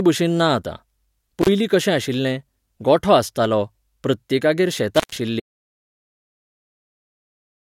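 A speech recording with two bursts of intermittent contact, at 1.41–1.49 s and 4.95–5.16 s, where a loose cable or plug opens briefly. The signal breaks for about 34 ms and then 127 ms, with crackle at each edge and faint hiss in the gap. From 5.4 s to the end, there is an audio dropout to silence: the sound stops mid-flow and is replaced by silence with no room tone, likely because the input device disconnected while the recorder kept writing.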